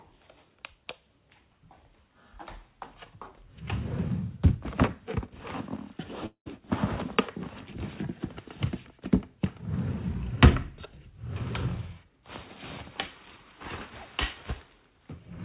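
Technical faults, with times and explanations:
6.26–6.48 s, long network dropout: the sound turns into a fading buzz lasting about 0.2 s, drops to near silence for about 0.1 s, then resumes with roughly 0.2 s missing, likely because packets stopped arriving and the receiver extended the last audio.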